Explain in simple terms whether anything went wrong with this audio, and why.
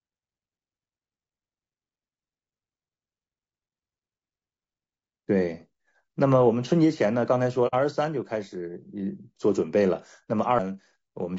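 Several things went wrong with this speech.

The whole clip sounds rough and grainy, with a hiss between the tones of the voice and a thin, artificial-sounding top end. That is the mark of low-delay AAC compression, likely the AAC-ELD format used in video calls squeezed too hard. Unlike a single dropout, this damage never comes and goes. It sits on every moment, because the coder is given too few bits to describe the voice faithfully.

At 7.67 s the sound fades out and back in over about 60 ms, and at 10.25 s it happens again for about 30 ms. This is AAC frame loss with muting. Pieces of the compressed stream never arrived, so the decoder played silence in their place. The fades are smooth. The speech also picks up right where it would have been, so nothing is skipped or repeated.

At 10.59 s there is a tiny tick and an almost instant mute, after which the speech carries on from a different point. 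That is a CD skip: the disc player's laser jumped to another turn of the disc. It differs from the frame losses because it has a hard-edged tick instead of a soft fade, and because the audio lands somewhere else in the recording instead of continuing in place.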